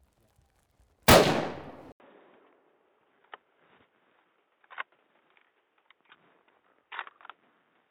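A recording of sounds that goes dull and boxy at 1.92 s, after an 80 ms gap. From there to the end nothing reaches above 3.8 kHz, a faint new background noise sits well under the sound, and the level barely shifts. It's likely an input switched to a poorer device.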